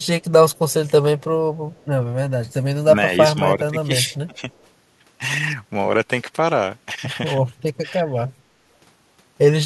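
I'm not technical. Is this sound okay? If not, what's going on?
No. There are two problems. Faint echo leak is heard at 0.00 to 0.06, 0.51 to 0.73, 1.72 to 1.85, 4.10 to 4.16 and 4.35 to 4.62 seconds. It is a very quiet repeat of the voice, trailing about 0.3 seconds behind. Likely, the far end plays the call through a speaker and its echo cancelling lets some through.

Speech suppressed in double talk happens at 3.19 to 3.92, 4.26 to 4.47 and 8.01 to 8.13 seconds. Here the voice briefly dips or thins out, most sharply around 4.3 seconds. This likely happens when both sides talk at once and the echo cancelling turns everything down.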